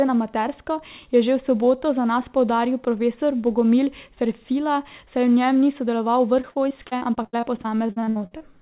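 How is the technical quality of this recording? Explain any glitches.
The recording has a clear fault near the end. It is band-limited, with nothing above 4 kHz, which points to a G.711 A-law call codec at 64 kbps.

From 6.42 to 8.42 s there is repeated packet loss, heard as robotic sound. About two dozen short gaps occur, the longest 66 ms. Each gap is filled by stretching the previous sound. About 30% of that stretch is concealed, so the speech turns choppy.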